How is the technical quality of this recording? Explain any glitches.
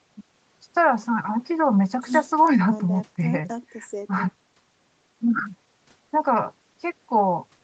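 No glitches: the speech has the expected call-path sound, with the lowest bass trimmed by the microphone processing and no content above 8 kHz, which fits a wideband Opus call.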